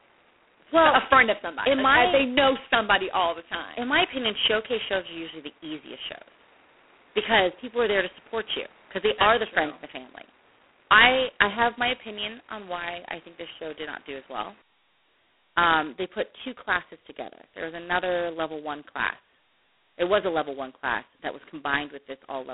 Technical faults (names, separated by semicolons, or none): G.726 ADPCM